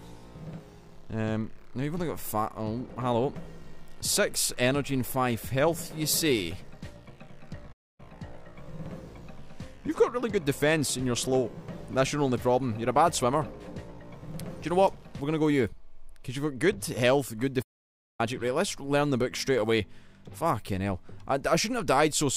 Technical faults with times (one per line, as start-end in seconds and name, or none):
7.72-8.00 playback stall
17.62-18.21 playback stall